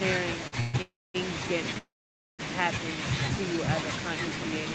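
At 0.47–0.54 s there's a short stall from a late packet: the receiver holds the sound about 48 ms, then resumes with nothing lost. Call audio freezes follow at 0.60–0.76, 0.82–1.16 and 1.78–2.41 s, likely from delayed packets. Each starts as a fading buzz, the last two dropping to silence for about 230 and 510 ms before picking up where they stopped.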